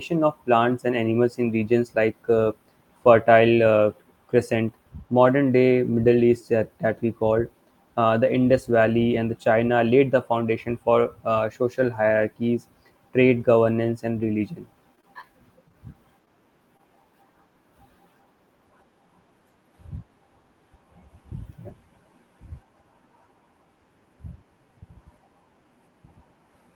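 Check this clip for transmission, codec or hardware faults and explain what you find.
Two kinds of network fault are audible in this speech, clustered between about 15 and 17 seconds.

Repeated packet loss (robotic sound) runs from 14.95 to 15.27 s, just after "trade governance and religion". There are four short holes, the longest 17 ms. About 60 ms of audio is lost. The receiver covers 53 ms by extending the preceding sound, so the stretch turns choppy.

Short stalls from a late packet follow at 15.68–15.72 s, 16.25–16.29 s and 16.77–16.81 s. Each time a packet arrives late and the jitter buffer runs dry. The last sound is held for 19, 19 and 23 ms, and then playback resumes where it stopped. Nothing is lost. Each stall is a brief drawn-out moment with a slight buzz or dip.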